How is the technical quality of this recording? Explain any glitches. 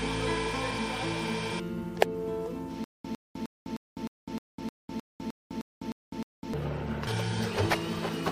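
The recording has one clear glitch. From 2.84 to 6.54 s there is a stutter with silent gaps, likely a stalled stream replaying its last fragment on each retry. A 104 ms burst repeats twelve times, every 308 ms, separated by 203 ms of digital silence, and the audio meant for that span is lost. On a waveform it appears as identical blocks with flat zero-line gaps, and on a spectrogram as repeated vertical slices between empty black columns.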